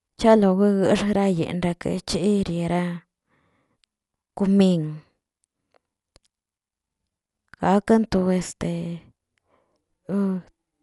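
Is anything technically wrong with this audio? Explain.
Yes. Dolby Digital compression runs throughout: the speech is likely from a low-bitrate AC-3 encode, fitting about 64 kbps, that cut the band at 11.4 kHz and left many lines for decoder dither. It sounds plainly dull, with rough fluttering noise around tones.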